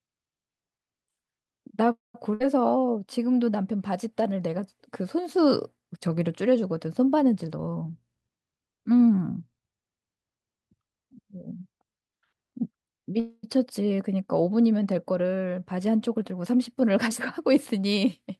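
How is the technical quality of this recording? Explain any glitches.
The recording has a few noticeable glitches from the call connection. The sound comes through a call codec with its top end stopping around 12 kHz.

Call audio freeze, 1.91 to 2.16 s and 13.20 to 13.45 s: the audio stalls for roughly a quarter second each time, most likely because packets got held up and the jitter buffer ran dry. The last sound is stretched into a fading buzz or hiss. The first stall goes silent for about 160 ms, while the second fades only briefly. Then the sound picks up exactly where it left off, so nothing is lost, just delayed.

Burst of packet loss, 2.34 to 2.42 s: about 60 ms of audio never arrived in time. The receiver covers the hole by carrying the last sound on as a fading buzz or hiss, then jumps ahead, so that stretch is genuinely missing.

Jitter buffer speed-up, 7.47 to 8.60 s: the buffer had built up extra delay, so the receiver trimmed tiny pitch-period slices over and over, cutting around a fifth of a second in total. 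The sound plays at about 119% speed with unchanged pitch, so it comes across as rushed.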